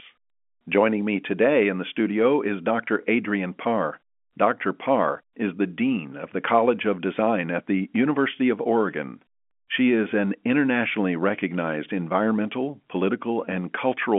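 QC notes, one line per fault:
Nothing to flag here: the speech comes over a G.711 telephone line, so it has that narrow phone-band sound with nothing above about 3.7 kHz, and that's just how this kind of line works.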